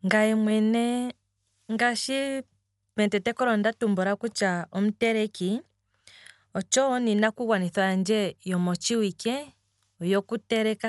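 Throughout the speech, nothing is heard above about 11.5 kHz, and tones carry a rough, fluttering hiss, likely from Dolby Digital compression at a rate fitting 64 kbps. Unlike MP3 swirl, starved frequency lines are refilled with dither noise, giving grainy fuzz rather than metallic warble.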